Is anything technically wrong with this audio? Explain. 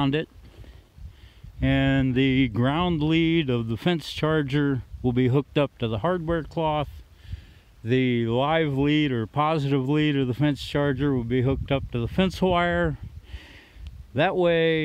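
No, nothing technically wrong can be heard here.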